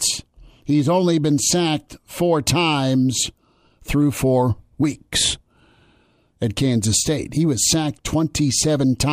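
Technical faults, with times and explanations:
No technical faults can be heard in this clip.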